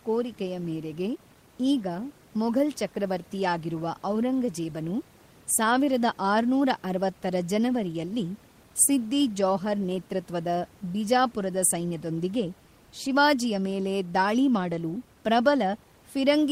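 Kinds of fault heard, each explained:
Nothing stood out on listening to this speech, with the room's own background noise sitting about 31 dB below the voice.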